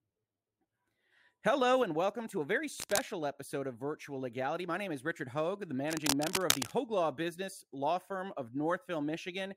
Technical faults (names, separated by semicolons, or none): cable scratch noise